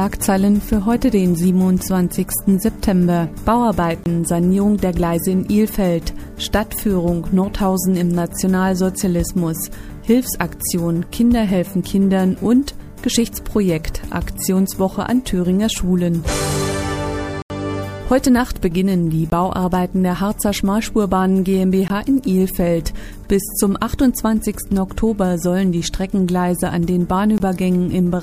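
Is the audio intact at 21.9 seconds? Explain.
No. A block of digital silence runs from 21.88 to 21.90 s, a 20 ms stretch where the sound drops out. The output buffer was most likely not filled in time, so zeros went out in place of the signal, and the audio stops dead and resumes with no fade on either side. At this length the gap is heard as a short hole.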